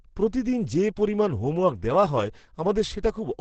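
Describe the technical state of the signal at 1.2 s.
At 1.2 s, as throughout, likely Opus compression in its low-bitrate SILK speech mode removes everything above 8.9 kHz, leaving the speech muffled and hoarse.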